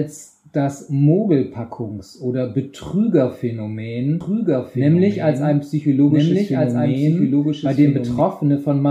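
Doubled audio track, 4.21 to 8.21 s: a dry copy about 5 dB quieter trails 1.5 s behind, likely captured again by a slower path.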